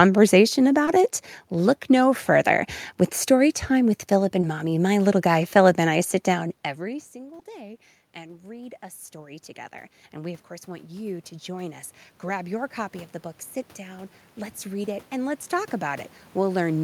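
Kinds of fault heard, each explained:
short concealed packet loss: About 20 ms of audio arrived too late at 0.85, 4.41 and 7.39 s. The decoder covered each gap by extending the preceding sound, which produces a tiny smear or wobble. A spectrogram shows a brief blurred vertical strip where fine detail flattens.
automatic gain rising: The gain control slowly raised its gain after the input dropped, by about 5 dB over roughly three seconds following a fall of about 24 dB from 6.28 and 10.1 s; it rose again from 13.76 s. Voice and background swell together, so the waveform envelope and noise floor climb gradually.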